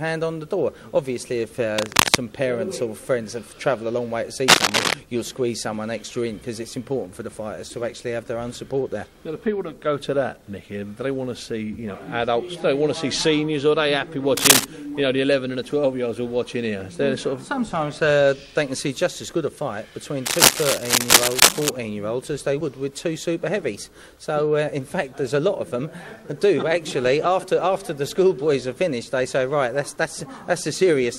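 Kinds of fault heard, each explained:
Cable scratch noise: four bursts of dense, uneven scratching, louder than the sound, likely a worn cable or connector changing contact resistance as it moves.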